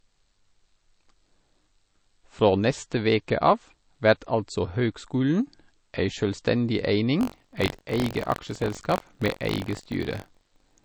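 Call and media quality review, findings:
Band-limited, smeared speech throughout. Likely low-bitrate audio saved at a high bitrate: an earlier low-rate MP3 pass removed the top band and added artefacts. The high-rate re-encode cannot restore either.

Buffer tearing from 7.19 s to end, after "altså høgskulen ei sjølvstendig". A robotic 46.9 Hz buzz is present only under signal, which fits a 1024-sample buffer. The writer and hardware read pointer have slipped. A small slice of each period repeats audio from one lap earlier.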